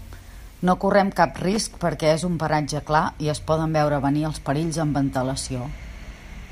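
From 1.53 to 1.81 s, between "correm cap" and "perquè és un paratge", loose connector crackle: an intermittent contact chops the speech into irregular scratching bursts, unlike evenly spaced digital clicks.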